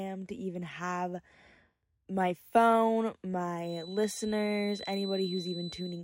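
At 3.6 s, just after "my phone", a feedback whistle appears and holds to the end of the clip: a thin, steady 4 kHz tone sitting well below the speech. It likely comes from a loudspeaker-to-microphone loop hovering at the edge of feedback.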